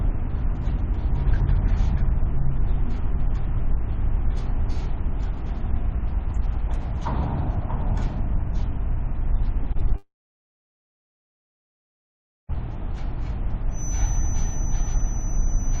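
From 9.63 to 9.92 s the audio turns choppy: this is repeated packet loss. Four short holes open in quick succession, the longest about 19 ms, and each is patched by stretching the preceding sound, so roughly a quarter of that stretch is filled-in material. What separates it from a single dropout is the rhythm: brief stutters that keep recurring, with real sound still getting through between them.

Almost immediately, at 9.96 s, a long network dropout is the likely cause of the audio vanishing until 12.51 s. The last fragment is drawn out briefly as a fading buzz, then about 2.4 s of near silence follows. When the audio returns, it resumes without the missing span rather than catching up. Unlike the packet loss just before, this is one unbroken gap, with nothing getting through.

From 13.69 s to the end at 15.8 s, a thin steady whistle at 6 kHz sits well below the main sound and swells and fades slowly in level. 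This is a feedback whistle, likely from a loudspeaker-to-microphone loop held just short of runaway. A single fixed pitch that neither grows nor follows the audio marks it as feedback rather than broadband noise or a concealment artefact.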